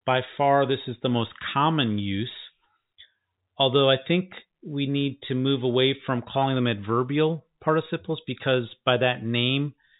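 No technical faults can be heard in this speech clip. It comes through the G.711 telephone coding, so the sound stops at about 3.8 kHz and carries only the faint background hiss of that 8-bit logarithmic format, which follows the level of the voice.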